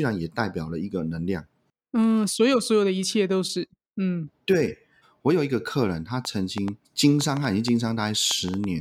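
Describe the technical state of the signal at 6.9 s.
Irregular ticking cuts through the speech there, part of a train of clicks from 6.25 to 8.65 s at about 4.2 per second, well above the signal, likely electrical interference.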